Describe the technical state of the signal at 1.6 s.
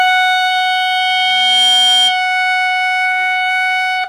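At 1.6 s a loudspeaker feedback squeal (0.51 to 2.2 s) dominates: loop gain above unity makes a 3.2 kHz tone swell over about a second to roughly 5 dB above the music.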